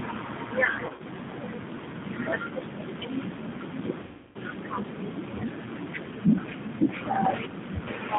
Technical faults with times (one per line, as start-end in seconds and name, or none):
0.00-8.19 G.729 codec
0.86-1.03 VoIP packet loss concealed by the speech codec
4.02-4.37 VoIP packet loss concealed by the speech codec